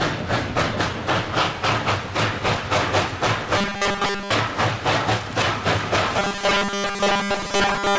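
From 3.58 to 4.31 s, and again from 6.19 s to the end, new audio likely arrives too seldom, so playback loops a 5 ms slice and skips most of the real signal. This is robotic sound from repeated short buffers: a rigid, metallic 200 Hz buzz over the band-limited call audio, which stops at 8 kHz.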